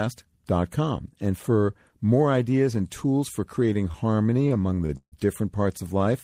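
Repeated stalls (stutter) run from 3.73 to 5.14 s, just after "ideas and tools for". Packets arrived late, so the jitter buffer kept emptying. The receiver stretched the last sound through 15 gaps, the longest 149 ms. The speech drags and stutters, but nothing is lost.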